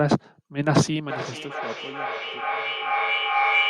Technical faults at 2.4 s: feedback echo between two devices

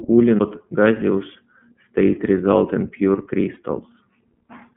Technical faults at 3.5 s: iLBC codec; lost iLBC frames

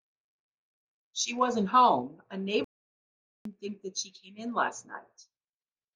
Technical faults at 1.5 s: none

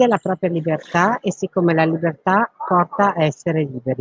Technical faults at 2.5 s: none

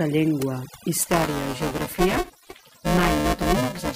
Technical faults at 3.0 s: overdone noise removal; buffer tearing

